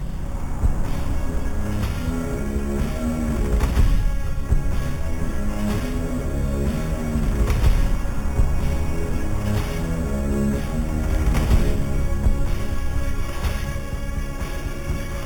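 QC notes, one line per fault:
throughout, imaging from sample-and-hold upsampling: there's a bright, metallic fizz riding on everything, and its level tracks the sound. Each sample was simply repeated to raise the rate, with no smoothing filter, so mirrored copies of the spectrum leak up above the original band. The first copy sits between 4 and 8 kHz at about -24 dB relative to the signal, which fits audio that started out at 8 kHz.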